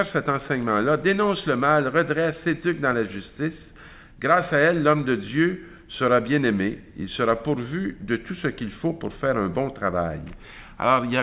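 No technical faults can be heard anywhere in the audio; the signal stays continuous and steady throughout.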